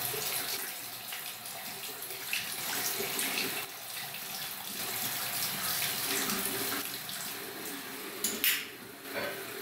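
At 0.57 s the sound abruptly drops by about 6 dB and stays quieter until 2.58 s. The same sudden step down returns from 3.65 to 4.79 s and again from 6.82 to 9.05 s, each time snapping back to full level. This is one channel dropping out, likely a stereo feed losing one side for a stretch. Summed to mono, material shared by both sides halves in level, and anything present only on the lost side vanishes.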